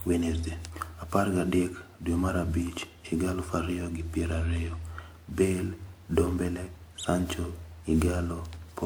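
Generation loss runs throughout the speech, sounding swirly, hollow and smeared with blurred attacks, likely from roughly ten successive lossy re-encodes, which fits WMA near 128 kbit/s.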